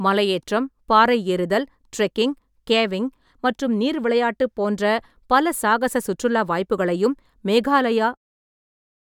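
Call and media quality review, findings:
No faults found in the speech; the level tapers off in a smooth fade-out from around 8 s to 8.18 s, with no click or hard edge at the end.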